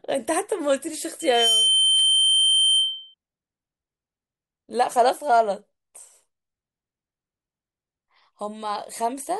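Speech with loudspeaker feedback squeal from 1.20 to 3.14 s: a 3.1 kHz tone swells in about a third of a second and sits a few dB above the voice, because the mic is catching its own speaker.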